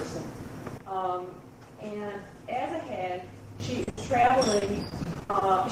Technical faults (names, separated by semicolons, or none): sudden gain jump; repeated packet loss (robotic sound)